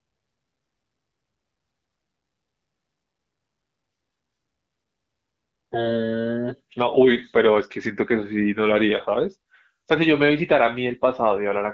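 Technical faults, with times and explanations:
No technical faults occur in this speech clip, so there are no times or explanations to give.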